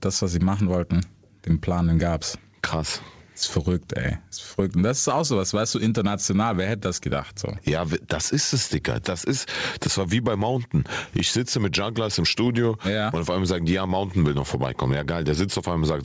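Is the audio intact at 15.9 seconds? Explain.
No. At 15.9 seconds, as throughout the speech, there is gain pumping: the gain swings by roughly 10 dB, leaving the levels squashed. The likely cause is gain set far too high, with a fast limiter clamping down on every peak. The call codec also leaves nothing above 8 kHz there.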